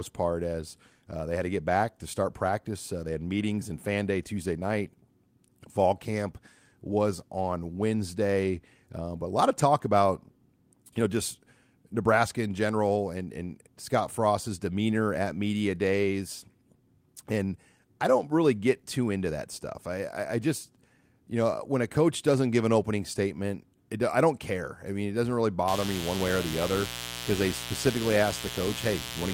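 A steady, raspy mains buzz enters at 25.68 s, after "mean it doesn't really", sitting about 10 dB below the speech to the end: spiky 60 Hz interference with harmonics.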